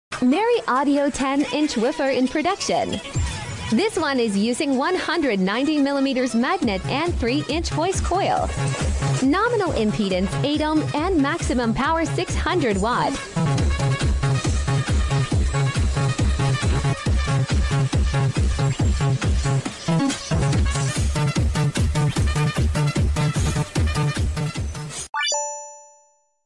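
From 20.89 s, a wrong sample rate plays samples unconverted, fitting 22 kHz audio run at 24 kHz, so sound speeds up 1.09 times and rises 1.47 semitones.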